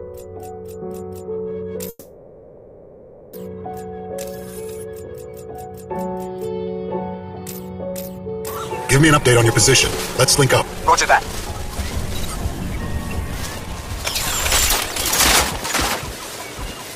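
The audio has two kinds of fault. From 1.89 to 3.34 s there is a call audio freeze. The last sound stretches into a fading fill and barely goes silent. Then the audio resumes where it stopped, 1.44 s later, with nothing lost. Packets were likely held up in transit, emptying the jitter buffer. Jitter buffer speed-up follows from 9.01 to 14.14 s. The audio runs at 127% speed, at the same pitch, and sounds hurried. Roughly one and a half seconds are trimmed away in short pitch-period cuts. A milder speed-up, at 106%, runs from 15.56 to 16.40 s and removes only about 70 ms. Both shrink a backlog of buffered audio.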